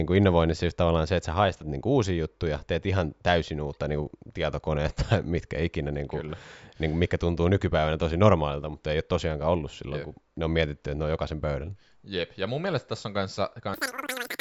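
Speech clip, and right at the end, from 13.74 s to 14.41 s, it hits a wrong sample rate: three times too fast and about 19 semitones high, which fits 16 kHz audio played at 48 kHz.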